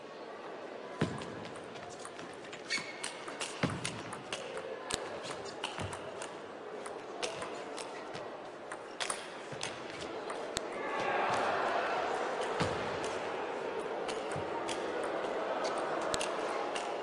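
File header played as audio at 4.94, 10.57 and 16.14 s: each is a sharp, loud click where a new piece of the recording begins. Leftover WAV header bytes at each join were decoded as sample values, producing a brief burst unrelated to the surrounding sound.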